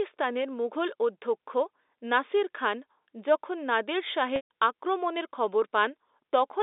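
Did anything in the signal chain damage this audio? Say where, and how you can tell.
Yes. Packet loss with pitch repetition at the network stage, from 4.36 to 4.47 s. The speech briefly holds a buzzy, repeated tone, then fades toward silence before cross-fading back in. That is the receiver bridging a gap of about 140 ms, which fits roughly seven 20 ms packets, by looping the last pitch period and fading it over about 50 ms. The G.711 line band of 300 Hz to 3.7 kHz is audible throughout.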